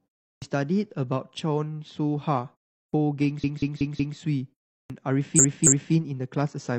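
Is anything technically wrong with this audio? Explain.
Yes, there are two problems. Clipped start after a pause at 0.35, 2.86 and 4.83 s: the output device dozes off during each pause of roughly a third of a second and wakes late, swallowing about 65 to 73 ms, so the speech lurches in without its first sounds. Repeated frames at 3.39 to 4.14 s and 5.34 to 5.90 s: a 186 ms block plays four extra times, then a 279 ms block twice more, which fits short runs of compressed frames being resent. You hear a stuttering loop, and the clip gains about 1.3 s in total.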